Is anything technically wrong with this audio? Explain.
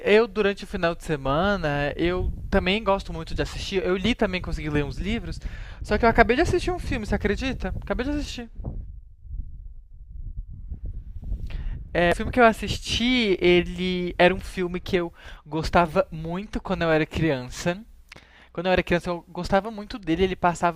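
Yes, there's one glitch in this speech clip. At about 12.12 s there's a brief burst of damaged data in the compressed stream. Part of the encoded data there came through wrong, so the decoder couldn't read those frames properly, lost its place and had to hunt for the next valid frame header before it could pick the audio back up. You hear it as a quick chirp or blip, over in a flash.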